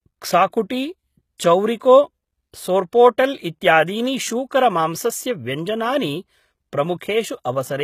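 From start to finish the s sounds are gritty and metallic, and nothing reaches above 14.9 kHz. The cause is likely HE-AAC compression: treble is rebuilt from copied lower bands instead of coded, so harmonics misalign, which fits a bitrate near 20 kbps.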